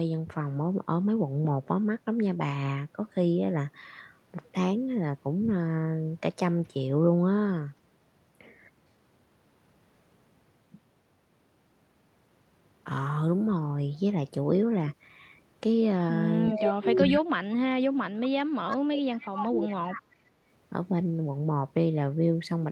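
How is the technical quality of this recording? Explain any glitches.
The recording has a troubled stretch from about 16.5 to 20.4 seconds, with three kinds of glitch.

Echo leak appears at 16.5, 17.02, 18.69, 19.14, 19.68 and 19.92 s. A copy of the speech, about 5 to 25 dB below it, returns about 377 ms late. It is likely leaking from a loudspeaker past the echo canceller.

Speech is suppressed in double talk from 16.56 to 20.01 s. The voice dips by up to about 40 dB in pieces. Both sides likely spoke at once, and the canceller turned down its own talker along with the echo.

Background is gated by the echo canceller from 20.29 to 20.41 s. Room sound drops by about 14 dB for a moment, then returns when the canceller releases the microphone.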